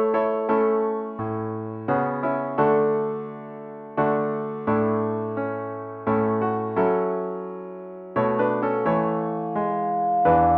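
Loudspeaker feedback squeal starts at 8.73 s and runs to the end at 10.57 s. A microphone is hearing its own loudspeaker, and at 706 Hz the loop gain passes one, so a pure tone swells over roughly a second and a half until it sits about 5 dB above the sound.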